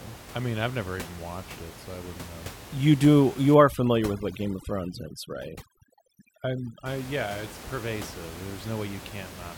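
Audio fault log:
3.55–6.86 s, overdone noise removal: For these three seconds or so, the noise reduction is pushed far too hard. Any frequency band close to its noise estimate gets cut deep or switched off. The quiet parts of the speech go with the noise. The background drops and breaks up into twinkling specks. Full room noise, about 16 dB below the speech, comes back just before "yeah it's pervasive".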